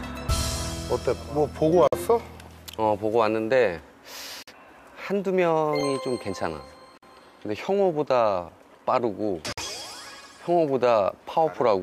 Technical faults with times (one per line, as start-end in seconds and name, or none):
1.88-1.93 gap between chunks
4.43-4.48 gap between chunks
6.98-7.03 gap between chunks
9.53-9.58 gap between chunks